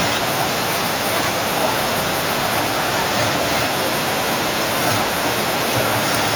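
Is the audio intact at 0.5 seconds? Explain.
No. At 0.5 seconds, as throughout the speech, there is echo with no canceller: the far end's loudspeaker feeds its microphone, returning each phrase about half a second later, about 24 dB down. Unlike room reverberation, it's a distinct, delayed, thinner repeat rather than a smooth tail.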